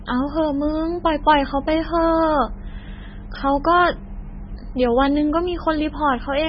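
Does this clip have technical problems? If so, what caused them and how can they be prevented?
Yes. Throughout the speech, nothing remains above 5.5 kHz and the sound is watery and swirly, likely from heavy MP3 compression at a bitrate near 16 kbps. Encoding at a higher bitrate prevents this.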